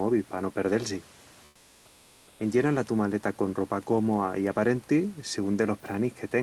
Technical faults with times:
1.47-2.39 comfort noise in place of the background

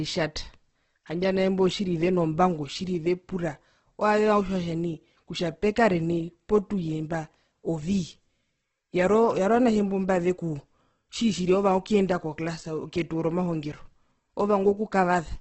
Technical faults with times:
0.00-15.40 Opus compression

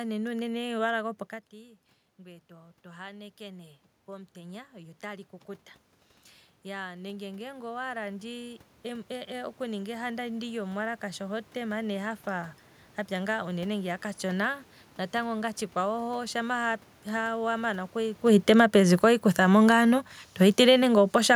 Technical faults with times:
1.50-5.34 automatic gain rising
6.63-12.58 automatic gain rising
18.23-19.66 automatic gain falling
20.32-21.31 automatic gain falling

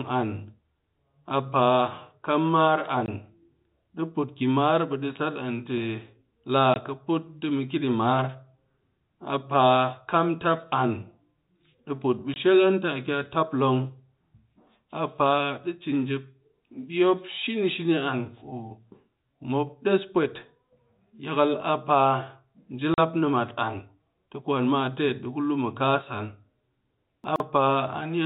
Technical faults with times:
3.06-3.08 packet loss filled with silence
6.74 packet loss filled with silence
12.34 packet loss filled with silence
22.94-22.98 packet loss filled with silence
27.24-27.40 chunks out of order

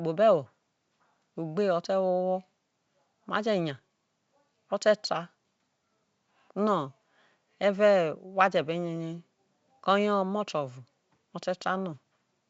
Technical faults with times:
none

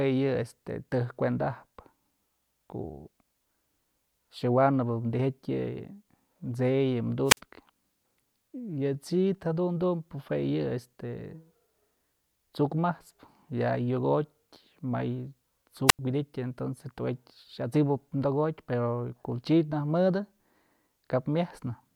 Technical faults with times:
7.25-7.39 wireless microphone squelch dropout
15.87-15.99 wireless microphone squelch dropout

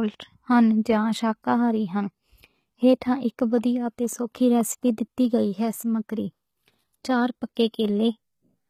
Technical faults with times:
0.00-8.70 HE-AAC compression

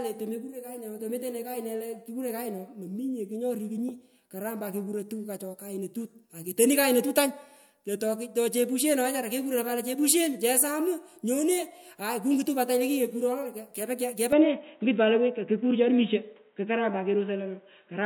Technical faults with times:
14.32-18.05 input switched to a poorer device

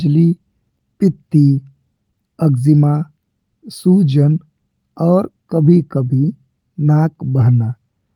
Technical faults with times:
none

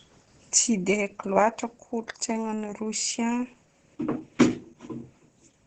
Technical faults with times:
0.00-5.67 Opus voice compression

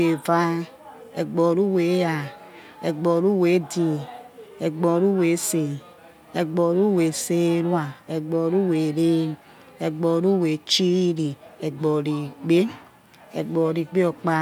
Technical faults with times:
none

